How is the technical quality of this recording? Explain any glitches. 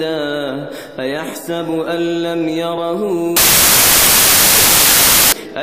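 There's one real glitch, and it's hard to miss. From about 3.37 to 5.32 s the audio collapses into loud, harsh broadband noise, a classic case of samples built from the wrong bytes. The decoder has lost track of how each sample's bytes fit together, whether shifted by a byte or in the wrong order, so the jittery low-order bits end up as the big part of every value. That's why it turns into a harsh noise.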